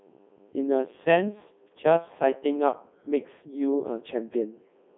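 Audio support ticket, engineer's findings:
Codec 2 vocoder, whole clip. Robotic, buzzy speech; band roughly 200 Hz to 3.6 kHz, nothing above 3.9 kHz. Decoder rebuilds speech from sine waves using pitch, voicing, energy and envelope only; waveform discarded. Heavy damage, fits the 3.2 kbit/s mode.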